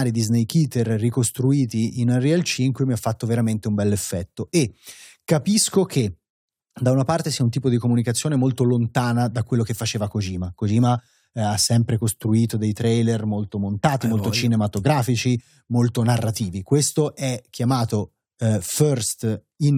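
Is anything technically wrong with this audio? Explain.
No, nothing is technically wrong with this audio.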